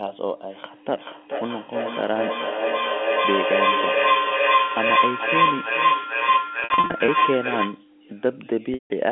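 From 0.99 s to 7.88 s, a feedback howl builds. Two devices in the same room are on the call, and the path from loudspeaker back into microphone adds gain on each pass, so the repeats grow rather than die away. They narrow to a piercing tone around 5 kHz that pulses roughly every 0.4 s, the loop's round trip, and peaks at about 10 dB above the speech.

Between 6.6 s and 7.08 s, packet loss with pitch repetition overlaps the howl's final stretch. Gaps totalling 260 ms are scattered across 480 ms, the longest run 60 ms, consistent with 20 ms packets. The receiver loops the last pitch period to cover each hole, giving brief held, buzzy fragments. At 8.74 s to 8.90 s, a single 160 ms gap outlasts that concealment, so the repeated period fades toward silence before the sound cross-fades back in.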